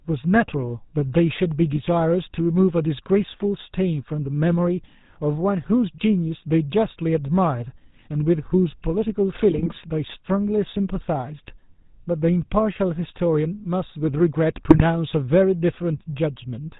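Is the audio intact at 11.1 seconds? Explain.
No. At 11.1 seconds the speech, like the rest of the clip, carries the damage of the GSM full-rate codec, which runs throughout. The codec models the vocal tract and drives it with pulses spaced at a fixed interval, keeping only a third of the excitation samples, at a rate that sounds like about 13 kbps. That gives a plainly audible buzzy, gravelly roughness. A spectrogram would show nothing above 4 kHz and smeared, coarse harmonics.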